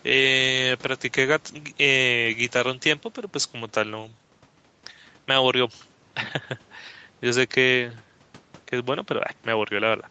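No technical faults can be heard in the speech. Nothing reaches above 8 kHz, which fits the call microphone processing and a WebRTC call path with the Opus codec running in wideband mode.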